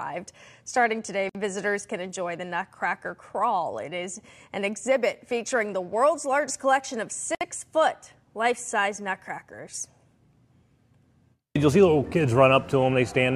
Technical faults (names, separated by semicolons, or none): gap at a join of encoded pieces